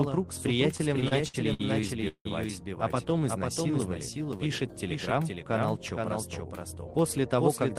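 A doubled audio track runs through the whole clip. A second, full-band copy trails the original by about half a second. It sits about 5 dB lower. It has no decay and no room colour, so it is not an echo. The likely cause is the same signal captured twice, once through a slower path. Every onset is heard again, flat and slightly quieter, smearing the timing of everything.

From 0.77 to 2.27 s come repeated stalls, a stutter. Packets arrived late again and again, and the jitter buffer ran dry ten times. Each time, the receiver stretched the last sound to cover the hole. Together these fills add up to about 0.4 s, roughly a quarter of that stretch. The longest single wait is 169 ms. Nothing is lost. The sound drags and catches instead.

From 3.20 to 4.49 s there is a jitter buffer slow-down. The buffer was short of audio and needed a reserve. So the receiver repeated single pitch periods and fragments of pauses, many times over. 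This adds 112 ms in total. The playback rate drops to 92 percent, yet the pitch stays put. Sounds are drawn out.

From 6.72 to 7.76 s a jitter buffer speed-up follows. Now the buffer held too much audio. To cut the delay, the receiver removed short slices of one or a few pitch periods, over and over. Roughly 70 ms disappears. Playback runs at 107 percent with unchanged pitch. The closing second sounds hurried and clipped along, as if pushed slightly forward.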